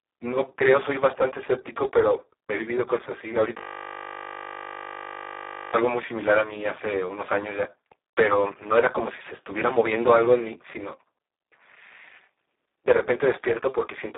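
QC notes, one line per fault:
Throughout: Speex codec. The speech sits in a narrow telephone-style band of roughly 300 Hz to 3.7 kHz, with nothing at all above 3.8 kHz, so it sounds boxed-in and dull. Damage is heavy: the voice is hoarse, buzzy and edging on robotic, because at a rate that fits about 4 kbit/s the codec has almost no bits left to describe the excitation.
3.58 to 5.74 s: system hang loop. For just over two seconds the audio collapses into a steady buzz at 50 Hz. The same 20 ms fragment repeats exactly, over and over, while the machine or driver is stalled and the sound hardware keeps replaying one stretch of its ring buffer. Because the looped piece is so short, the repeats fuse into a tone rather than a stutter. The length points to a buffer of roughly 20 ms.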